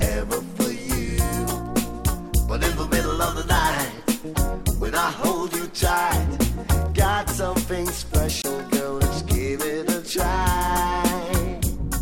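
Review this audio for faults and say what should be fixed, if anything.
At 8.42 to 8.44 s the audio drops out for about 21 ms and then resumes. This is likely a Bluetooth dropout: a packet arrived too late for the headphones and was discarded, leaving silence, and a gap this short fits a single lost packet. Unlike an edit cut or a stall that pauses playback, the sound picks up where it would have been had it kept playing, so the missing moment is gone rather than delayed. To prevent it, reduce radio interference and distance, or use a wired connection or a more robust Bluetooth codec setting.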